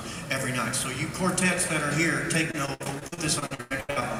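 From 2.51 to 4.03 s, repeated packet loss leaves frequent holes, up to 97 ms, patched by extending earlier sound, making the audio choppy.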